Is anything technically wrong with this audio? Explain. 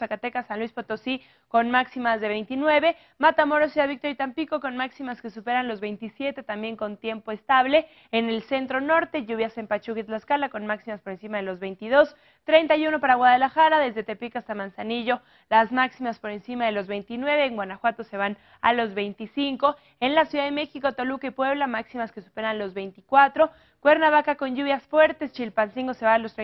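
No, no technical faults heard.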